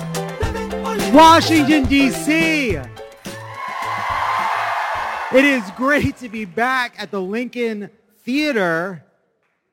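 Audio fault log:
throughout crude rate conversion: samples are picked by nearest position instead of being filtered, which fits a change from 48 kHz to 44.1 kHz, leaving a gritty, inharmonic fizz about 25 dB below the sound. A spectrogram shows faint stray tones beside strong partials, and the waveform shows small periodic steps.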